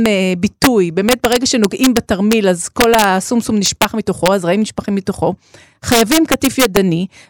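Integer overflow occurs throughout the speech, at 0.06 s, 0.64 to 0.67 s, 1.09 to 2.33 s, 2.81 to 3.04 s, 3.66 to 3.85 s, 4.26 s and 5.92 to 6.77 s. The level was pushed about 1 to 3 dB beyond the integer limit, and instead of being held there, each excess peak wrapped to the opposite extreme. On loud passages this produces hard, violent cracks, far harsher than clipping.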